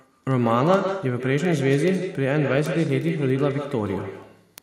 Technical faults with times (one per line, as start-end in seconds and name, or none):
0.00-4.62 echo with no canceller
0.17-4.58 word clock ticks